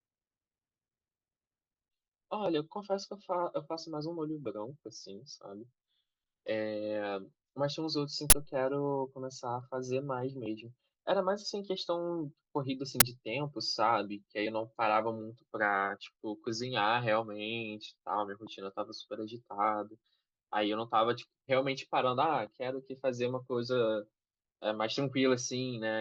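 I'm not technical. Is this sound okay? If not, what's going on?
No, there are two quick glitches in this speech. At about 8.30 to 8.32 s, and again at 13.00 s, you get a sharp, loud burst of digital noise. That's an uninitialised buffer: the playback grabbed a chunk of memory before any audio had been written into it, so leftover junk got played as sound. The first burst fits a 1024-sample buffer and the second a 512-sample one, which is why each lasts only a split second.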